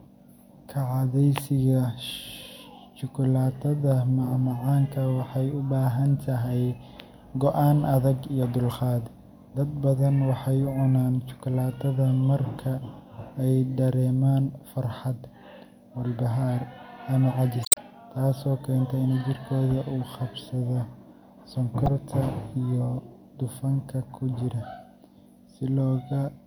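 Damaged data in the compressed stream makes the decoder misread frames and lose sync while it hunts for the next valid header. In this speech, that produces a short blip from 17.62 to 17.78 s, between "walbahaar ama" and "taasoo keenta in jirkooda", and a tiny one at 21.86–21.88 s.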